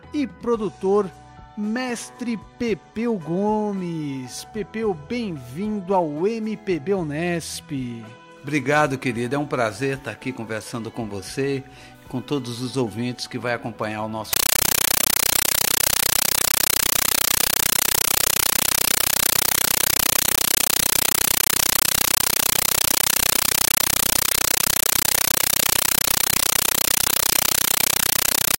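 From 14.33 s to the end, the sound gives way to harsh, very loud chattering static: a compressed stream played as audio. The AC-3 data is being treated as plain samples, giving 9.33 ms noise bursts repeating at 31.25 Hz, which fits a 448 kbps Dolby Digital stream that was never decoded.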